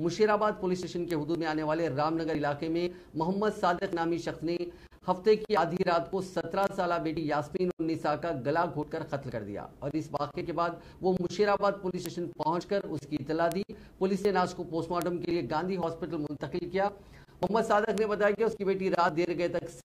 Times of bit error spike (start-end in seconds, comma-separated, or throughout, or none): 1.11, 6.64, 12.06, 13.52, 15.02, 17.98